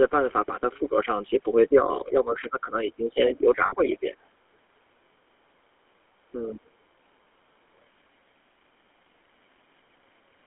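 Throughout, the speech has the buzzy, gravelly texture of the GSM full-rate codec. The band is held to roughly 200 Hz to 3.4 kHz, and the roughness from coarse pulse-driven excitation is plainly audible. This fits the 13 kbps full-rate coder.

From 1.68 to 4.15 s the voice repeatedly dips by up to about 10 dB, for around a second and a half in total. This is likely speech suppressed in double talk, with the echo canceller ducking the talker while the far side speaks.

Inside that stretch, from 3.66 to 3.74 s, lost GSM frames leave a 60 ms rough, metallic hold as the decoder repeats the last good frame. This fits three dropped 20 ms frames.

From 3.92 to 4.10 s a faint second voice, roughly 25 dB below the main speech, comes through. This is likely the other side's voice leaking through, as loudspeaker echo the canceller did not fully remove.

From 6.33 to 6.70 s the voice drops much harder, by up to about 25 dB for roughly 300 ms. 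This is likely again speech suppressed in double talk.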